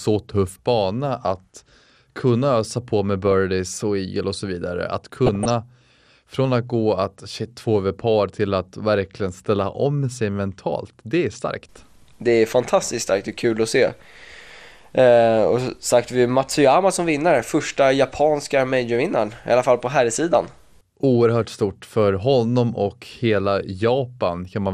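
Throughout, the speech sounds dull and gurgly with a granular edge, most likely MP2 compression at around 80 kbps starving the upper sub-bands of bits. From 3.23 to 3.32 s, between "kunna ösa på med" and "och eagle och så", then again from 5.26 to 5.50 s, there's DAB burbling: bit errors slipping into the audio data, putting short blips of noise into single sub-bands.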